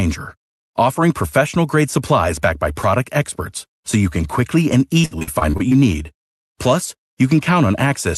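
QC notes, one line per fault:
5.01–5.73 s, repeated packet loss (robotic sound): after "you can quickly and", eight dropouts up to 57 ms get patched by stretching the last sound, so it turns choppy and robotic.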